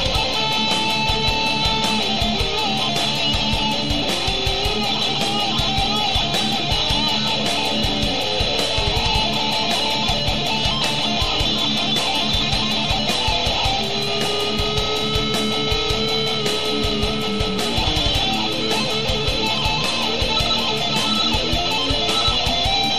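Switching spikes from a dimmer, rectifier or unshielded line are riding on 60 Hz mains, producing a steady, raspy mains buzz throughout, fairly prominent, roughly 15 dB below the sound.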